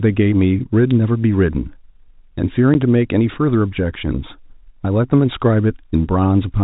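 At 0.91 s there's a sharp little snap sitting right on top of the speech, over in a few milliseconds. That's an electrical switching spike, most likely a nearby switch, motor or static discharge arcing briefly and the audio line picking it up as a click.

Then at 2.74 s you get a short hole: packet loss filled with silence. About 10 ms of audio just drops out, which points to a single lost packet, and the receiver played nothing in its place. The G.711 phone band carries the speech on either side, with nothing above 4 kHz.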